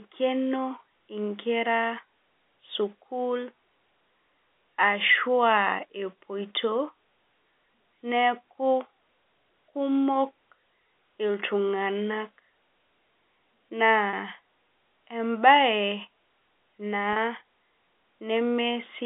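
At 14.1 s and again at 17.13 s, packet loss with pitch repetition briefly holds the speech for about 30 ms, which fits a single lost packet each time. The receiver bridges each gap by repeating the last pitch period, so it sounds like a slightly sustained buzz rather than a click or a drop to silence.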